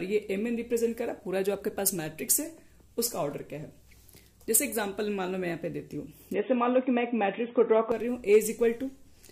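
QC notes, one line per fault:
6.34–7.92 s, input switched to a poorer device (likely): band abruptly stops near 3.8 kHz, with faint new noise and a modest level change; unlike plain filtering, tone, level and noise change together, then recover.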